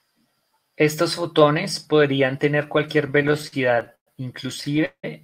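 Speech that drags and stutters from 3.07 to 4.09 s and again from 4.55 to 5.05 s, with repeated stretched, fading holds (the longest about 0.18 s). These are repeated stalls (stutter): packets arrived late, the jitter buffer kept running dry, and the receiver extended the last sound until data resumed.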